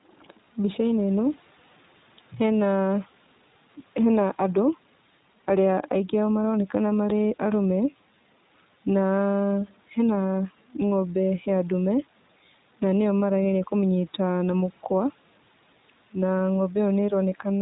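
It's a speech clip, and the whole thing has gone through the iLBC codec, a narrowband VoIP coder. Nothing above 4 kHz survives, so it sounds boxed-in and telephone-like. The damage is plainly audible: a rough, slightly synthetic edge, since each short frame's excitation is coded on its own. That fits 20 ms frames at about 15.2 kbps. The call microphone processing's high-pass trims the lowest bass, which is normal.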